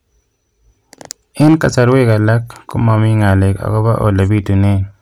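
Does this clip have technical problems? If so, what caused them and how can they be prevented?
Yes. Hard clipping appears from 1.11 to 2.29 s and from 2.93 to 3.31 s. The speech overdrives a stage by about 5 dB, then about 2 dB. Peaks are cut flat, adding harsh upper harmonics. Prevent it by lowering gain before that stage.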